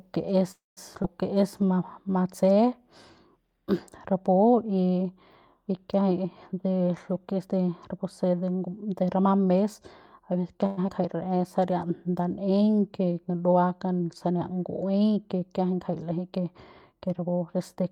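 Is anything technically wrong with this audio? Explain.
Yes. This speech has four kinds of network playback fault, each heard twice, all pointing to a call path with an unsteady jitter buffer.

Call audio freeze at 0.51 to 0.79 s and 10.66 to 10.79 s. The speech stops and the last sound is stretched into a fading buzz. In the first case it dies to near silence for about 170 ms of the 253 ms gap. The second, 112 ms long, never goes fully quiet. Speech then resumes exactly where it left off. The likely cause is late packets draining the buffer while the receiver filled in.

Skip ahead at 1.03 to 1.06 s and 10.87 to 10.90 s. Here the opposite happens: the speech lurches forward, with around 70 ms of sound gone and the two sides butted together over a join of only 5 to 9 ms. A stretch of audio was dropped, on the way or by an overflowing buffer, while later audio was already waiting, which clips a fragment out of the speech.

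Jitter buffer slow-down at 1.34 to 2.13 s and 11.16 to 11.61 s. The speech drags to about 94% and then 91% of normal speed while the pitch stays put. Sounds are drawn out. The receiver rebuilt its reserve by repeating single pitch periods and slivers of pauses, adding roughly 50 ms each time.

Jitter buffer speed-up at 6.53 to 9.53 s and 16.33 to 17.90 s. The delivery becomes hurried, at about 108% and then 106% speed, again without a pitch change. With too much audio queued, the receiver trimmed short pitch-period pieces in quick succession, cutting roughly 300 ms in the longer stretch and about 100 ms near the end.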